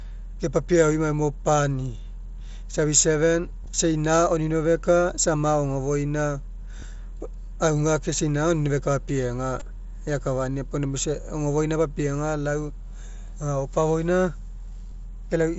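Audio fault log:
3.64, 6.80 to 6.82, 9.60 and 14.91 s: concealed Bluetooth headset packet loss. Short gaps of about 15, 22.5, 15 and 7.5 ms were patched by the receiver, which looped the closest-matching piece of the preceding waveform. Each gap fits one to three lost headset packets. The single lost packet is nearly hidden, while the runs of two and three packets come through as a brief buzzy tone, with a faint warble as real audio resumes through the light mSBC wideband coding.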